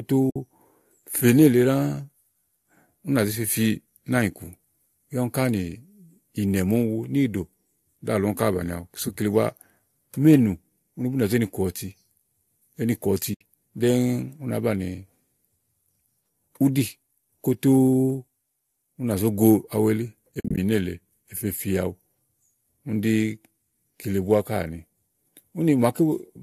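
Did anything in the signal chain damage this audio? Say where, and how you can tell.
Yes. AAC frame loss with muting at the network stage: soft-edged dropouts at 0.30 to 0.36 s (60 ms), 13.34 to 13.41 s (70 ms), and 20.35 to 20.58 s, where about 150 ms goes missing in short gaps of up to about 50 ms. The decoder zeroes the lost frames' spectrum, so the overlapping windows fade the speech out and back in. The gaps fit frames of about 10 ms, and a slight graininess throughout is likely from the low-delay AAC compression.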